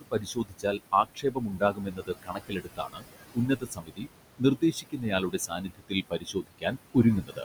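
A speech recording runs through a noise suppressor that pulls its estimated noise down by about 20 dB, leaving noise suppressor artifacts throughout: the noise sinks between words and rises under them over room noise sitting about 12 dB below the speech. The suppressor also misreads parts of the speech as noise, so the speech is cut by the noise suppressor, with soft sounds swallowed by up to about 21 dB across 0.01–3.07 s, 3.34–4.09 s and 4.39–6.74 s, and by about 16 dB from 7.22 s to the end.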